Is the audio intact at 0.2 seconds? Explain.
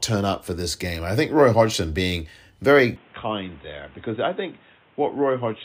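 Yes, the speech at 0.2 seconds is intact, with no dropout, click, distortion or other fault at that moment.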